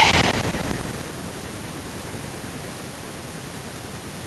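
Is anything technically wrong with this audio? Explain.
No, nothing in this speech recording is technically wrong: it carries the normal character of a WebRTC call path, with the top end stopping at 12 kHz, which fits Opus at a typical call bitrate.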